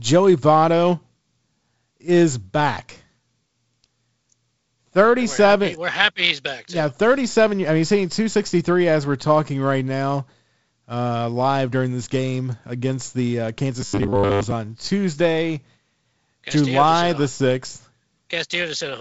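Speech carried over G.722 wideband telephone coding, with nothing above 7.7 kHz and a light upper-band hiss, collapses into a rigid metallic buzz at 100 Hz from 13.82 to 14.53 s, just after "game against the uh". This is robotic sound from repeated short buffers. Audio is likely arriving too late, so slices of about 10 ms are replayed across most of that stretch, forcing that fixed pitch.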